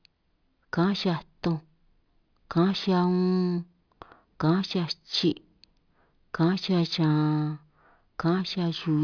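No technical faults are audible.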